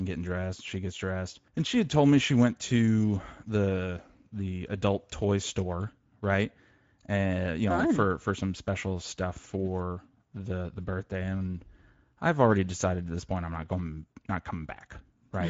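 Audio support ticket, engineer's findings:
Speex codec damage throughout: speech hoarse and noisy from sparse CELP excitation coding, nothing above 7.7 kHz; the sound fits a wideband setting near 16.8 kbps.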